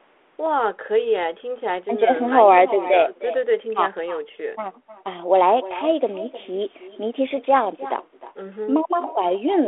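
The speech in this clip is followed all the way through by an echo with no canceller: each phrase comes back roughly a third of a second later, about 16 dB down, sounding thinner than the original. The far end is evidently playing the call on a loudspeaker into its own microphone, and nothing subtracts that return path. On a waveform each syllable burst has a smaller delayed twin trailing it, and a spectrogram shows faint ghost copies of every harmonic stack shifted right in time, all inside the 300 Hz to 3.5 kHz telephone band of the G.726 link.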